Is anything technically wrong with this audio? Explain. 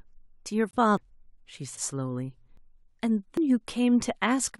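Yes, the speech has two kinds of fault: one muted gap from corrupt frames and four regularly spaced skips.

Corrupt frame muted, 0.69 to 0.76 s. Damaged bits in the compressed stream made the decoder reject the affected frames, and the player filled their slot with silence. The result is a 70 ms hole that cuts in abruptly, consistent with about three frames being lost. Timing carries on unchanged, so the speech resumes exactly where it would have been.

Audio missing between chunks at 0.97, 1.77, 2.57 and 3.37 s. The skips are likely caused by a recorder or processor working in one-second chunks and dropping a short stretch each time it closes one chunk and opens the next. Roughly a fifth of a second disappears at each boundary, and the two sides are butted together with no silence. That is why the skips fall 0.8 s apart.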